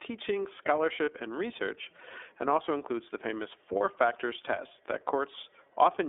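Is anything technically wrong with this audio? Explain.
Yes. The whole clip has passed through the iLBC codec, and it has two short dropouts from lost iLBC frames.

The iLBC codec damage runs throughout and is plainly audible. Each frame's excitation is coded on its own at low rate, which fits the 13.33 kbps mode with 30 ms frames. The line band is limited to 300 Hz to 3.6 kHz, so the speech sounds thin, slightly rough and synthetic. On a spectrogram, energy stops sharply at 3.6 kHz, with an empty band below 300 Hz.

The lost iLBC frames occur at 1.05–1.09 s, just before "and research and also", and at 3.78–3.81 s, between "also includes the famous" and "factors test that". Each gap fits a single missing 30 ms frame. The decoder fills it by repeating the last pitch cycle blended with noise, so it sounds like a brief held, buzzy vowel. The speech recovers immediately afterwards. In the waveform, each gap shows a few similar repeated periods. 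The spectrogram shows smeared, flat harmonics there.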